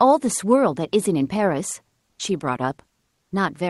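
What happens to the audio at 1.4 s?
Nothing goes wrong at 1.4 s: the speech there carries only the ordinary coding character of the call path it travelled through, with no dropout, click or other disturbance.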